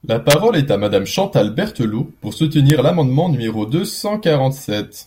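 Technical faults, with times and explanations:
0.30–0.34 s and 2.7 s, integer overflow: two violent cracks in the speech, the first just before "est à" and the second just before "l’amendement numéro deux". The loud peaks ran past the largest value the integer format can hold, about 1 dB over in the first case and only just at the limit in the second. Instead of being held at full scale, they wrapped to the opposite sign and swung across the whole range, so you get a hard snap that's far sharper than clipping.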